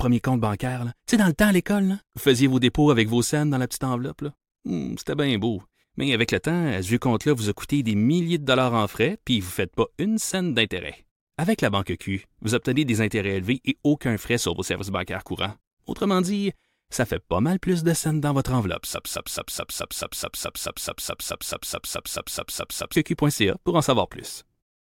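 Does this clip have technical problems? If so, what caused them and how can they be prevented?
Yes. Wi-Fi interference runs from 7.39 to 9.67 s as a faint, steady ticking roughly ten times a second, well below the speech. The tick spacing is 102.4 ms, matching a Wi-Fi access point's beacon interval. A nearby radio transmitter is being picked up by the audio wiring or input stage, which rectifies each RF burst into an audible click. To prevent it, keep phones and routers away from microphones, cables and preamps, and use shielded, balanced connections.

A broken-record loop occupies 18.94 to 22.96 s. The same 0.21 s fragment repeats back to back 19 times, and whatever speech belonged in those four seconds is gone. The likely cause is a stalled player, encoder or network stream that kept re-sending the last piece held in its buffer instead of going silent or waiting for new data. To prevent it, use a stable connection, leave enough buffering headroom, and record locally as a backup rather than relying on the live stream.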